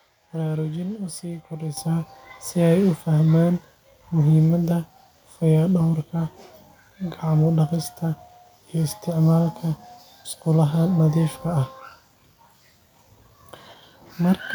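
At 1.77 s the speech and the background noise behind it jump up together by about 10 dB in a single step. This is a microphone volume stepped up: the call software judged the input too quiet and raised the device's input level at once.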